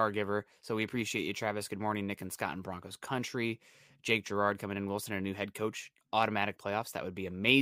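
No technical faults turn up anywhere in this recording; the speech just runs along without a single glitch to point at.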